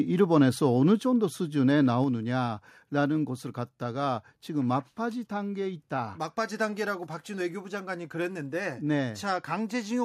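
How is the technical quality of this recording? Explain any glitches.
There are two sudden level drops early on, both what I'd call a microphone volume stepped down. At 1.02 s the whole signal, voice and room sound alike, falls by about 4 dB in one go, and at 2.04 s it drops again by about 3 dB. That two-step pattern most likely comes from the call software deciding the mic input was running too hot and turning the device's input volume down, so you hear abrupt step-downs rather than a smooth fade.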